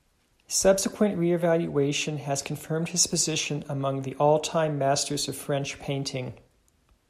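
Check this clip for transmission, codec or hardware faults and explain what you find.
Two bursts of DAB burbling are present in this speech clip. The first is a brief burst at 0.90 s, just before "reevaluation has confirmed his". The second, longer one runs from 3.70 to 3.87 s, right after "has confirmed his position". Residual bit errors, around 0.1 to 0.15 percent, slip past error correction and corrupt MP2 audio data. Wrong samples put short blips of noise into individual sub-bands, spread over several frames.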